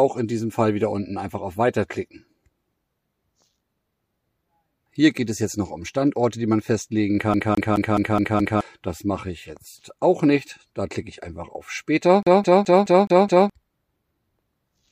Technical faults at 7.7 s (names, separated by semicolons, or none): CD stuck on one turn